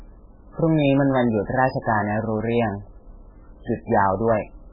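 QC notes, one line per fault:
throughout, MP3 compression. The speech has nothing above 5 kHz, so it sounds dull and boxed in. The damage is heavy. Quiet detail swirls and warbles, and s sounds come through as metallic chirps. Onsets smear instead of landing cleanly. The likely cause is an MP3 encoder starved of bits, which fits a very low bitrate around 8 kbps. It cuts the treble at a fixed point and drops weak frequency lines that flicker on and off between frames.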